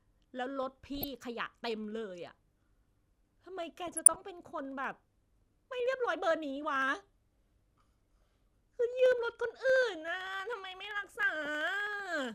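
From 0.05 s to 12.25 s there are periodic USB or driver dropouts. Every 64 ms a tiny slice of audio, well under a millisecond, is skipped outright. A blocked bus or driver causes it. The result is a steady train of ticks under the speech.

DAB burbling appears at 0.98 to 1.04 s, 3.87 to 4.21 s, and 11.16 to 11.23 s. Weak reception lets a small fraction of bit errors slip past error correction. Wrong samples put short blips of noise into single sub-bands.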